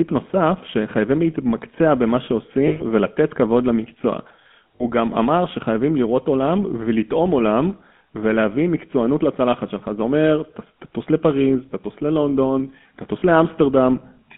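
From start to finish the speech carries the GSM full-rate codec's signature: a buzzy, gravelly roughness laid over a line band running from about 150 Hz to 3.5 kHz, which fits a 13 kbps full-rate stream. The coder rebuilds each stretch from a vocal-tract model excited by a coarse, decimated pulse train, and that is where the grit comes from. Simple band-limiting would sound muffled but clean, and a modern low-bitrate codec would swirl rather than rasp.

Lost GSM frames break in three times: 2.68 to 2.82 s, 4.76 to 4.84 s, and 13.20 to 13.23 s. The first gap fits roughly six 20 ms frames. Each time, the decoder keeps repeating the last good frame's settings, so the sound freezes into a short, metallic ring. A plain dropout would leave a hole instead. The 120 ms loss rings longest but stays too short to fade fully to silence.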